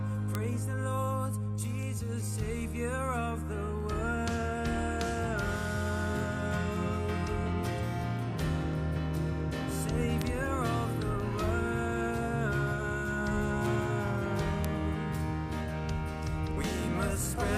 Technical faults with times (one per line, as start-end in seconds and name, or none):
0.35-17.11 word clock ticks